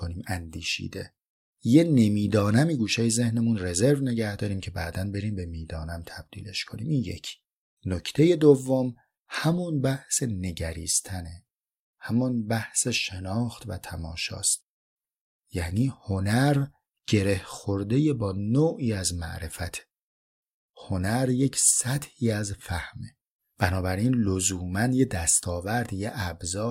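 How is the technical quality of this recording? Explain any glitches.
No glitches or faults heard.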